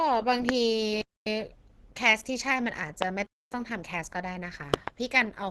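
Throughout the speech there is heavy Opus compression damage: grainy, rough, hoarse texture, with nothing above 18.3 kHz. This is likely a low-rate hybrid-mode encode, around 12 kbps. It differs from MP3 damage because the spectrum is filled with noise rather than swirling holes.

At 0.49 to 0.51 s a single loud pop, about 20 dB above the speech, sits on top of the sound, which continues underneath. A voltage step or pulse entering the chain likely produces this kind of spike. Unlike a dropout, nothing is removed.

From 1.02 to 1.27 s comes a gap between chunks: 250 ms of silence. The audio was delivered in 2-second chunks and silence was left at the join. The regular spacing sets it apart from random packet loss or a fade.

At 3.02 to 3.04 s another single pop, again about 20 dB above the speech, is added on top of the sound.

From 3.27 to 3.52 s a second 250 ms gap opens, exactly one 2-second chunk after the first gap ends.

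From 4.74 to 4.90 s there is a double pop, two sharp thumps in quick succession at about 25 dB above the speech. This is louder than the earlier pops.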